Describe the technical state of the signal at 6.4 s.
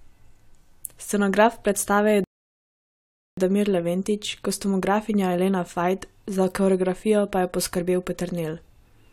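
At 6.4 s the speech signal is intact, with no audible fault at that moment.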